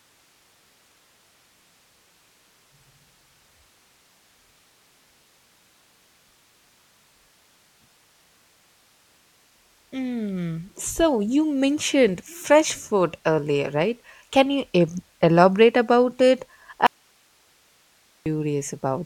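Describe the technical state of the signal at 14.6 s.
At 14.6 s the signal is intact, with no audible dropout, distortion, clipping or other fault at that point.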